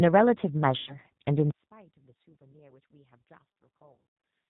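The whole clip passes through the G.729 codec at 8 kbit/s, which rebuilds speech from a filter and a few pulses, so nothing above 4 kHz survives and the voice sounds plainly rough and synthetic. From 0.78 to 0.96 s, VoIP packet loss concealed by the speech codec covers about 90 ms of missing audio. The decoder extrapolates from its last frames, stretching the speech into a fading buzzy tone or coloured noise. From 1.51 s to the end, the level drops by about 30 dB, likely because one channel is inverted, so the centred voice cancels in the mono sum and leaves only a faint remnant. At 3.92 to 4.05 s, packet loss strikes again, with about 230 ms lost in gaps scattered over 340 ms and the longest gap 90 ms, giving more smeared, decaying concealment.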